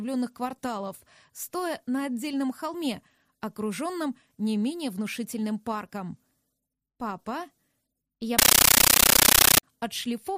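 A compressed stream played as audio runs from 8.39 s to 9.63 s. For that stretch the link carries undecoded Dolby Digital (AC-3) data, and the receiving end treats those bytes as ordinary samples. Each frame arrives as a 13.3 ms burst of noise followed by zero padding, repeating at 31.25 per second. The result is a very loud, rattling static chatter in place of the sound, at a density that fits a 640 kbps stream.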